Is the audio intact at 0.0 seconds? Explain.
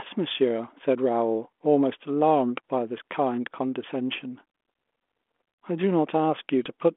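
Yes, the audio is intact at 0.0 seconds, with nothing breaking up the speech at that point.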